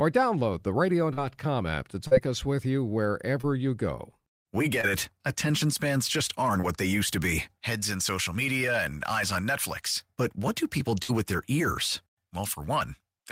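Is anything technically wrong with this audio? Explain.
Yes, there is packet loss in this speech clip.

Short concealed packet loss occurs at 1.13, 2.07, 3.41 (after "us with you"), 4.81 and 6.61 s (after "spans just aren't"). About 40 ms or 20 ms of audio never arrived, and the receiver extended the preceding sound to cover it. Each gap comes through as a brief smear or wobble.

A burst of packet loss runs from 11.03 to 11.11 s, between "what do people" and "with their ears". About 60 ms went missing in a row, and the receiver held the last sound while fading it. The result is a short buzz or hiss, after which the speech jumps ahead.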